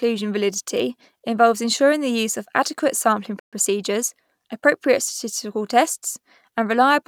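At 3.40 s, after "use of adequate sampling", the speech drops out for 0.13 s, likely a Bluetooth stall draining the buffer. The waveform goes flat and the spectrogram shows a blank column.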